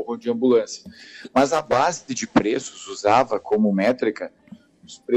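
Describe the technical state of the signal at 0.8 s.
At 0.8 s the signal is intact, with no audible technical fault at that point.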